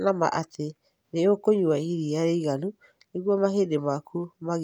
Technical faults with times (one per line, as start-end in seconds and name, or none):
none